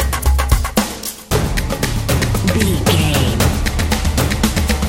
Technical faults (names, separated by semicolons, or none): overlapping chunks